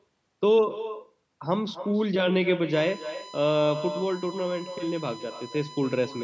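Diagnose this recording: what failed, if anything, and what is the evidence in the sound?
The far end of the call has no echo canceller, so its loudspeaker output reaches its microphone and returns after the network round trip. Throughout the speech, every phrase is shadowed by a thinner copy about 12 dB quieter, arriving roughly a third of a second later.

From 2.73 s to the end, a USB device's power or ground is leaking its 1 ms frame activity into the analogue path. The result is a steady 1 kHz whine, strongest at its fundamental and sitting roughly 20 dB below the signal. That fixed pitch points to USB full-speed framing.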